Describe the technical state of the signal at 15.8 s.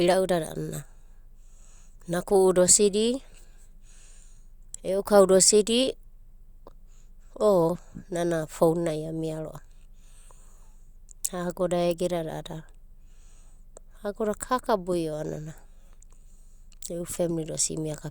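At 15.8 s the speech signal is intact, with no audible fault at that moment.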